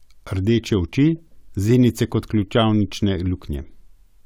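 No audible technical faults.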